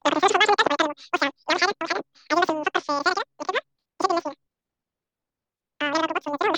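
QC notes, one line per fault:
Throughout, wrong sample rate: the speech runs about 2.76 times too fast and sits roughly 17.6 semitones high, nearly an octave and a half up, so everything comes out squeaky and rushed. Speed and pitch moved together by the same ratio, which means the samples were played out at the wrong rate with no conversion. That ratio fits 16 kHz material being played as if it were 44.1 kHz.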